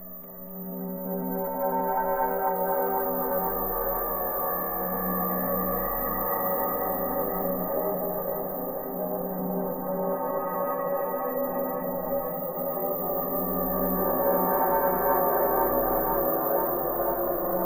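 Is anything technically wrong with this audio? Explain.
Yes. Throughout, the sound is watery and swirly with dulled treble and smeared attacks, likely MP3 compression at a bitrate that fits about 64 kbps, zeroing weak frequency lines.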